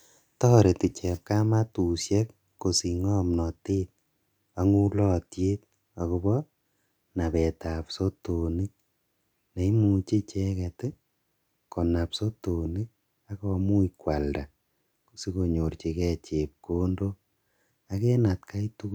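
The speech signal shows no technical faults at any point in the recording.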